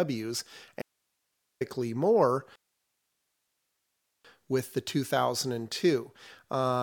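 At 0.82 s the speech drops out abruptly and stays gone until 1.61 s, coming back on "more with the". That's an audio dropout to a faint residue: about 0.79 s of the signal is simply missing, and the gap holds only hiss, roughly 50 dB below the normal level. The likely cause is the source being lost while the path after the break stayed live, so you hear the noise floor instead of dead silence.

The second problem starts at 2.56 s: everything cuts to silence until 4.25 s, then picks up on "with the" exactly where it left off. That's a rebuffering stall, where the player ran dry of downloaded audio and waited for more to arrive. Nothing is skipped, but about 1.69 s of dead air gets inserted, so it sounds like a hard freeze rather than a natural pause.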